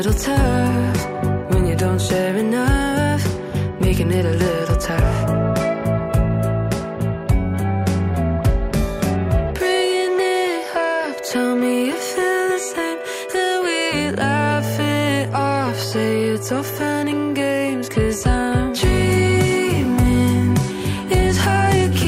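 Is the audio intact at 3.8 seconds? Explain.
Yes, at 3.8 seconds the audio is intact, with no dropout, click, distortion or other fault to be heard at that point.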